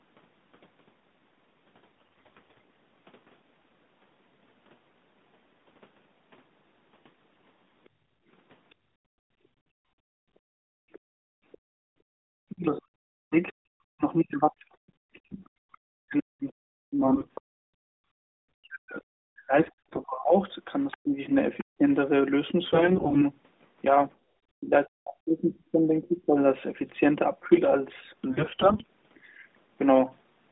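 First up, at 1.97 to 2.61 s, there's a burst of AMR bit errors: the weakly protected bits of the codec frames got flipped while the checksum still passed, so pitch and level hold roughly steady but the sound turns hoarse, scratchy and gargly. The same damage comes back at 14.50 to 15.40 s, 17.02 to 17.32 s, 19.56 to 20.03 s, 22.64 to 23.23 s and 28.30 to 28.87 s.

From 7.87 to 12.21 s the background gets gated by the echo canceller. It clamps the microphone while the far end plays, so the room sound drops by up to about 30 dB and comes back when it lets go. Shorter dips follow at 17.5 to 18.15 s and 24.17 to 24.32 s.

Between 8.7 and 11.58 s a faint second voice sits well underneath, most likely the other side's voice leaking through the loudspeaker past the canceller. It returns louder, though still clearly below the main talker, from 15.72 to 21.64 s.

From 12.49 to 26.37 s the main speech keeps dipping and cutting out in pieces, at worst by around 40 dB, likely speech suppressed in double talk. 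With both ends talking at once, the canceller turned everything down.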